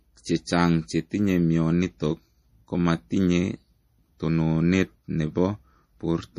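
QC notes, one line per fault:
Throughout, MP3 compression: the sound has a watery, swirly edge, s sounds chirp metallically, and nothing comes through above 15 kHz. That's likely an MP3 encoder short on bits, which fits a rate around 40 kbps. It chops the treble at a fixed point and drops quieter frequency lines that flicker in and out from frame to frame, hence the swirl, while consonant attacks get smeared.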